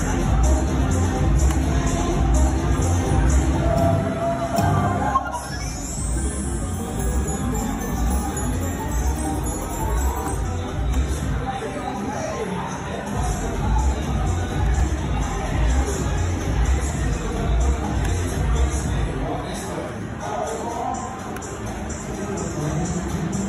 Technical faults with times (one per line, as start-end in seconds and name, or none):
14.80 block of digital silence